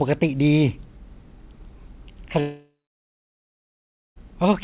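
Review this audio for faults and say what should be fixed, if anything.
A long network dropout, likely from packets lost in transit, cut off incoming audio from 2.40 s to 4.18 s. The receiver stretched the last sound into a fading buzz, then about 1.5 s of near silence follows before speech returns with roughly 1.8 s missing. A steadier network link, backed by redundancy or forward error correction, would prevent it.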